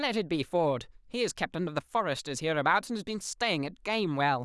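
No faults can be heard anywhere in the speech recording.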